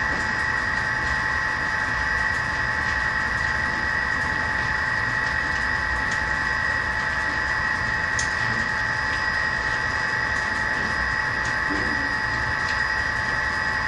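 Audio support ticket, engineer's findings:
No audible defects found across the recording; playback chain and source file check out as received, no action required.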